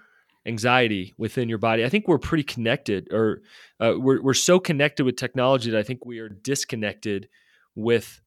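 At 6.04 s, just after "technology that I think", speech and background drop about 12 dB together until 6.30 s, a sudden gain jump likely from unramped digital gain.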